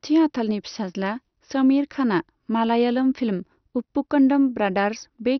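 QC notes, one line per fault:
Throughout, MP2 compression: speech is dull, with nothing above 6.2 kHz, plus gurgling, granular distortion from flickering, coarsely quantised sub-bands, likely a heavily starved, low-bitrate MP2 encode.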